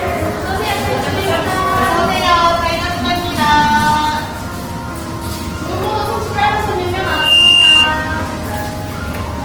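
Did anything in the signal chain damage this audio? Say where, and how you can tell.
Yes. At the codec stage, the whole clip sounds grainy and rough. The spectrogram shows noise-filled, smeared bands up to about 20 kHz, likely Opus compression at roughly 16 kbps.

At the acoustic pickup stage, a loudspeaker feedback squeal runs from 7.02 to 8.0 s. A 2.8 kHz tone swells within about 0.3 s to roughly 10 dB above the sound. It shows as one bright horizontal spectrogram line and a growing waveform envelope, because the microphone re-amplifies its own loudspeaker.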